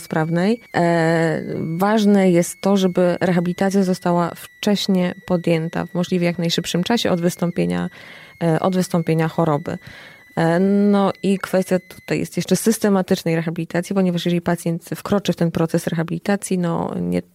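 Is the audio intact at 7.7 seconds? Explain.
No. At 7.7 s the audio carries a switching supply whistle, which runs from the start of the clip to 12.15 s. A switching power supply is cycling in a burst mode slow enough to fall in the audible band, so its switching energy leaks into the signal as a thin, high whistle near 2 kHz. Its pitch wanders between 1.93 and 2.31 kHz as the supply's load shifts, sitting roughly 30 dB below the wanted sound.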